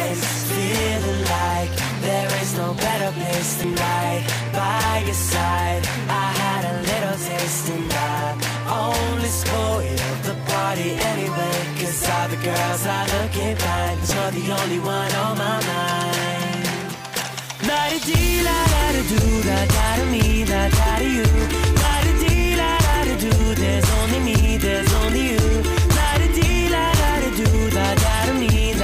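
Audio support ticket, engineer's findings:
Damaged data in a compressed stream, three brief glitches at 3.61–3.64 s, 14.08–14.12 s and 17.19–17.23 s, each about 33 ms. Decoder misreads corrupted frames and resyncs at the next header.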